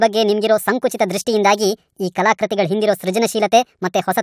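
Speech played at the wrong sample rate throughout, so it runs about 1.45 times too fast and sounds roughly 6.5 semitones high and hurried. Speed and pitch shift together with no conversion, which fits audio recorded near 22 kHz being played at 32 kHz.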